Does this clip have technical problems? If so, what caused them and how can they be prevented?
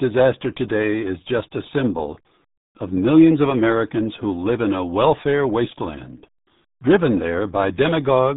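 Yes. Throughout the speech, the RealAudio 14.4 codec leaves nothing above 3.8 kHz and heavy gargly, muffled smearing, which fits an 8 kbit/s dial-up stream. Unlike a simple low-pass filter, it also garbles what remains. To prevent it, encode with a modern, higher-bitrate codec.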